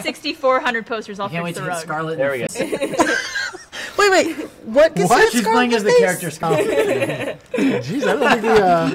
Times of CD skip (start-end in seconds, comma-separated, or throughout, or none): 2.47-2.49, 6.42